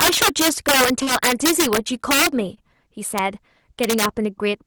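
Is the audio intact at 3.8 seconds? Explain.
No. At 3.8 seconds, as through the whole clip, loud moments in the speech break into violent, harsh cracks, far sharper than ordinary clipping. This is integer overflow: the signal is driven about 9 dB past the largest value the integer format can hold, and instead of being limited, those peaks wrap around to the opposite sign, jumping across the full range. Only a small fraction of samples, around 3 percent, cross that limit.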